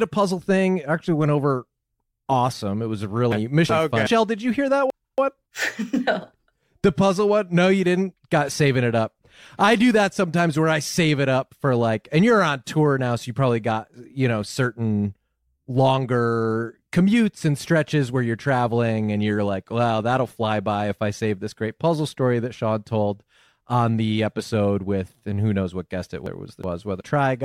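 Speech, with frames out of order at 3.32–4.07 s, 4.90–5.42 s and 26.26–27.01 s. In each stretch two adjacent blocks, about 0.37 s, 0.28 s and 0.37 s long, play with their halves swapped, which fits runs of four, three and four frames. It sounds like a garbled flutter. Unlike a dropout or a stutter, no time goes missing and nothing is repeated. The audio is just rearranged.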